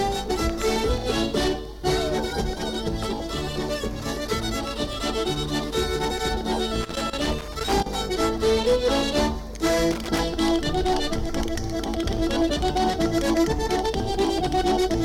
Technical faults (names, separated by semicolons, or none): loose connector crackle